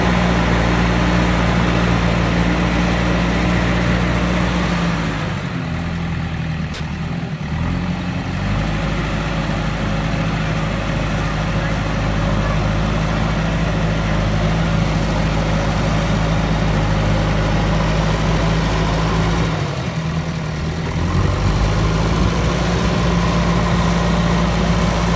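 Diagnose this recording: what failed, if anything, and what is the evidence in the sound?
Call processing failed. At 6.74 to 6.80 s, 60 ms of sound drops out to steady comfort noise, likely because the sound dropped by the voice detector was judged background.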